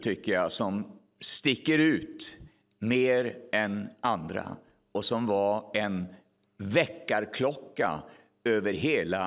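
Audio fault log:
Nothing to log for this speech recording, since no faults turn up anywhere in it.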